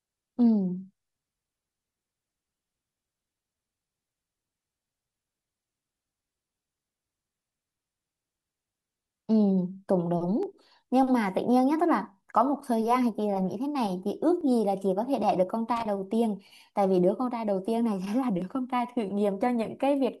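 Overlap between stream segments at 10.43 s and 14.41 s: segment timestamps collide at the boundaries of the 4 s segments, so the player trims real audio and the waveform jumps, heard as a tiny skip. Loose connector crackle from 15.76 to 15.85 s: a worn contact rapidly breaks the signal, giving a brief scratchy burst. The segment-overlap skip returns at 18.42 s.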